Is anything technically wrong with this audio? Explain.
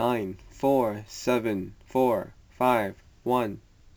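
Yes. Crude rate conversion runs through the whole speech clip, consistent with 32 kHz material brought to 44.1 kHz by repeating nearest samples without filtering. The irregular repeat pattern adds inharmonic error roughly 30 dB down, heard as gritty fizz tracking louder, brighter syllables.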